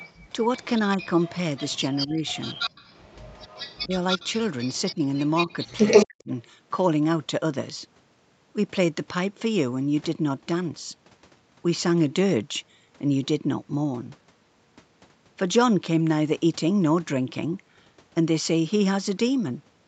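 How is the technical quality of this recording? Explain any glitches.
The recording has two related call faults in its first 6.3 seconds, and the band tops out at 8 kHz, which is consistent with ordinary call microphone processing.

Echo leak, 0.0 to 0.65 s and 1.0 to 6.22 s: a delayed copy of the speech sits behind the talker. This is likely because the far end plays the call through a loudspeaker and its echo canceller didn't remove everything its microphone caught, so the remainder came back down the line. The first stretch is faint, about 20 dB down, trailing by 227 ms. The second is much stronger, only a few decibels below the speech, and trails by 182 ms.

Speech suppressed in double talk, at 2.06 to 2.25 s, 3.85 to 4.21 s, 4.93 to 5.0 s and 6.05 to 6.31 s: the talker's level suddenly dips while the echo overlaps it. When both signals were present at once, the echo canceller likely couldn't tell them apart and turned everything down. 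The dips are roughly 20, 10 and 15 dB deep, and the last one, at around 40 dB, nearly silences the speech.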